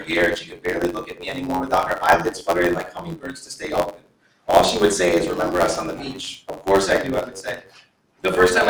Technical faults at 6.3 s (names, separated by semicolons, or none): noise suppressor applied to music or sounds; block size mismatch (truncated)